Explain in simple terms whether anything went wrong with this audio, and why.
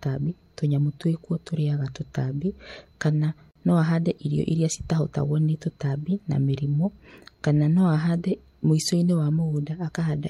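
A brief dropout cuts into the speech at 3.51 to 3.55 seconds, right after "twĩkuo tũrinyaga tũtambi kana" and just before "no ahande irio irĩa". For about 42 milliseconds the sound drops out, then resumes exactly where it left off. This is a gap at a join of encoded pieces. The audio was compressed in separate chunks, apparently about 10 seconds long, and stitched together without trimming the short stretch of silence each chunk carries at its edges.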